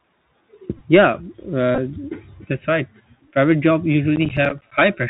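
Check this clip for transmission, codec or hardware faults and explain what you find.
The clip has three faults: a narrowband Bluetooth CVSD headset codec throughout, two bursts of Bluetooth headset packet repeats, and one stretch of processor overload crackle.

The Bluetooth CVSD headset codec runs throughout. Its one-bit adaptive delta coding, consistent with a 64 kbps link, removes everything above 4 kHz and adds plainly audible granular hiss and scratchy sibilance.

Bluetooth headset packet repeats occur at 0.77–0.82 s and 1.75–1.78 s. Lost packets, about 26 ms in each burst, were replaced by re-decoding the previous one, producing brief buzzy ticks with runs of around 15 ms.

Processor overload crackle occurs at 4.16–4.72 s. Roughly ten missed deadlines on buffers of about 10 ms left hard-edged silent gaps, heard as gritty tearing over the speech.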